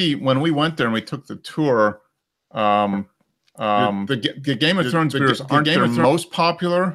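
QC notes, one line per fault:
2.93–6.05 s, doubled audio track: a second, full-band copy of the sound runs about a second behind the original at roughly the same level. It cuts in and out abruptly instead of fading or decaying, and it carries no room colour. That sets it apart from an echo or reverb tail. The likely cause is the same audio being captured again through a slower path, or an edit leaving two out-of-step copies layered.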